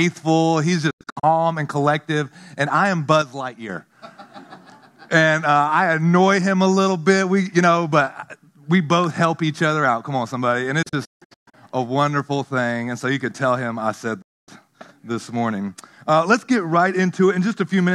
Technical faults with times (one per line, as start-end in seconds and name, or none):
0.90-1.24 digital broadcast dropout
3.22-3.69 sudden gain jump
10.82-11.54 digital broadcast dropout
14.21-14.49 digital broadcast dropout